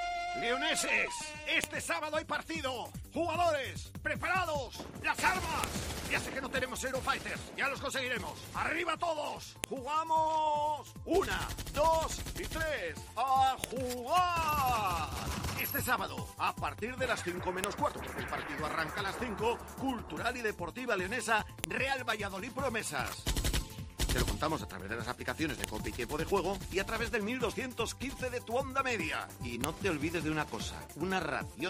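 File header played as audio occurs eight times, at 1.64, 5.64, 9.64, 13.64, 17.64, 21.64, 25.64 and 29.64 seconds, a steady four-second spacing. Each is a sharp, loud click or snap, under a millisecond long, that cuts through the sound regardless of what it is doing. The audio appears to be assembled from four-second pieces whose header bytes were never stripped, so those bytes are played back as raw samples at every join.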